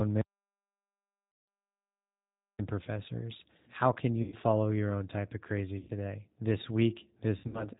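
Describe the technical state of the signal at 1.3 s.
At 1.3 s the signal is silent, with no room tone. This is an audio dropout to silence running from 0.21 s to 2.59 s, about 2.4 s in all. The input was likely lost through a disconnected device, a failed link or a stray mute, while recording carried on writing silence.

Starting just after, from 1.32 s to 1.48 s, is VoIP packet loss concealed by the speech codec. This 160 ms stretch fits eight lost 20 ms packets. The decoder filled the gap by extrapolating from its last pitch and filter settings and reducing the gain frame by frame.

Underneath all of this, the whole clip passes through the G.729 codec at 8 kbit/s. Its damage is plainly audible: nothing above 4 kHz survives, and the speech takes on a rough, synthetic quality from the codec's pulse-based reconstruction.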